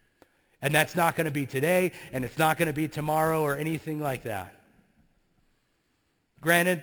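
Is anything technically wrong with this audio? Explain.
Yes, there's imaging from sample-and-hold upsampling throughout. The sound points to 12 kHz speech being raised to 44.1 kHz by repeating each sample with no smoothing. That leaves a mirrored copy between 6 and 12 kHz, about 16 dB down. It comes across as a bright metallic fizz that follows the speech and moves opposite to its pitch.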